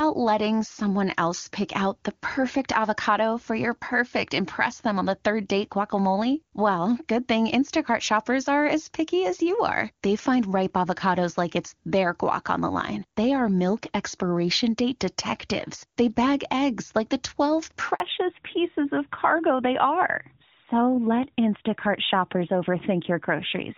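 A speech recording from a phone call. At 17.94 s a handover gap occurs: while the call switched networks, no speech frames arrived, so the voice drops out abruptly and stays silent for 60 ms until the new link carries audio again at 18.0 s. From that moment to the end, a fallback to narrowband takes hold. The call leaves HD Voice, whose earlier sound is bright and clean and consistent with AMR-WB at around 23.85 kbit/s, for an older narrowband codec, likely AMR-NB near 12.2 kbit/s. With nothing above 4 kHz, the voice turns duller, more muffled and rougher.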